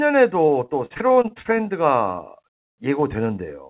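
From 0.46 to 1.51 s, repeated packet loss (robotic sound) punches around a dozen holes, none longer than 43 ms. The patches fill about a quarter of that speech, sounding choppy.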